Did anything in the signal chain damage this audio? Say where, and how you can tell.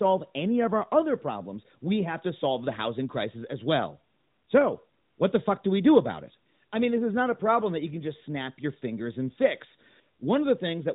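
No, nothing in the signal chain stood out as damaging this speech on listening.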